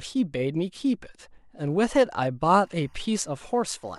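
From 2.51 s to the end, a faint, steady chirping warble sits behind the speech, roughly 40 dB below it, flickering between two pitches around 1 kHz and 2 kHz. This is timecode bleed: a linear timecode signal from an adjacent track or cable has leaked into the audio path. The code is a square wave that toggles between those two frequencies as it encodes each bit, and its rhythm fits code running at 23.976 frames per second.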